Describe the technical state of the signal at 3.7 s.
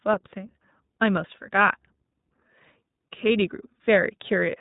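At 3.7 s the speech is still passing through the iLBC codec, which runs through the whole clip. The encoder codes each short frame's excitation on its own, with a blockiness that fits 20 ms frames and a bitrate around 15 kbps, and discards everything above 3.8 kHz. So the sound is narrowband and dull, with no sibilant air, and carries a plainly audible rough, slightly synthetic grain.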